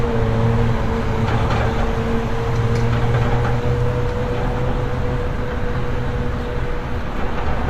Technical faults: damaged data in a compressed stream

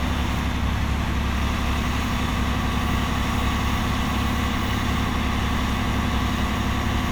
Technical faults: none

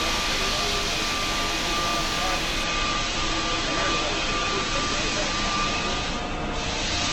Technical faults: adaptive stream at a lower bitrate

